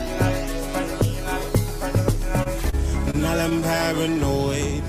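At 2.43 s and again at 2.70 s, the sound briefly hangs: a sliver of sound is held for about 22 ms, then about 30 ms, with a faint buzzy or dipped quality, before carrying on with nothing skipped. Each is a short stall from a late packet. The jitter buffer ran dry, so the receiver stretched the last bit of audio until the packet turned up. Playback then resumed where it had stopped, running 22 and 30 ms further behind.

From 3.11 to 3.81 s the audio drags and stutters, catching four separate times in that stretch. The longest catch lasts about 28 ms, and together they add about 64 ms of held sound, roughly 9% of the span. This is repeated stalls (stutter). Packets kept arriving late, emptying the jitter buffer again and again. Each time the receiver extended the last sound to cover the wait, so nothing is lost, but the timing lurches.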